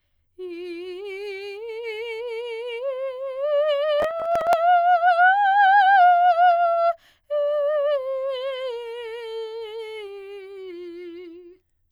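From 4.00 to 4.53 s, processor overload crackle: a run of missed short buffers, each skipped, giving gritty tearing rather than one clean gap.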